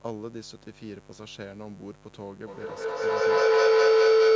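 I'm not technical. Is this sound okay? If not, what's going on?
No. A steady, raspy buzz sits under the speech from start to finish. This is mains buzz: electrical interference from the 50 Hz power supply, probably from a dimmer, a charger or poor shielding, leaks into the audio as sharp spikes that stack into that rough hum.

From 2.47 s to the end, a howling tone around 400 Hz swells until it is far louder than the speech. This is feedback howl: the microphone picks up a loudspeaker playing the same call, so the sound loops round and grows with every pass.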